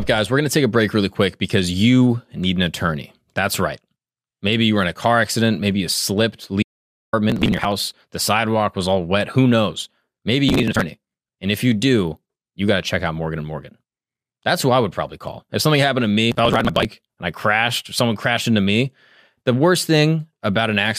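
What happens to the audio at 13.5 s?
Nothing goes wrong at 13.5 s; the speech runs through that moment intact, with no dropout, click or other fault.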